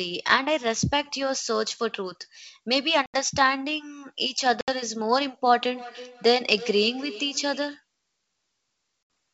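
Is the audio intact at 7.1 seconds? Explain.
No, 7.1 s falls inside feedback echo between two devices (5.61–7.83 s): another device replays the speech into the mic, so it repeats roughly every 0.3 s, about 16 dB down.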